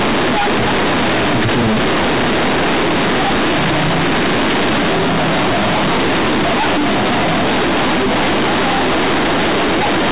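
From the very start and all the way through, the speech has the companded-audio-read-as-linear problem. The bytes were written as A-law but get played back as plain linear 8-bit samples, so nothing expands them. Every sign flip throws the output across roughly half its range, and quiet bits come out as loud as the peaks. The result is harsh, buzzy, badly bent distortion, with heavy noise filling the pauses. Underneath it, nothing above 4 kHz passes, as in telephone coding.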